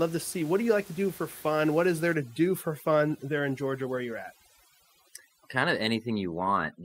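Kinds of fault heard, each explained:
Overdone noise removal: After "is there", from 2.14 s, bands near the noise level are cut away. Quiet voice parts go too. Background twinkles.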